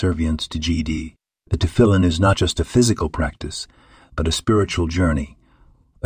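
Speech recording with no faults found.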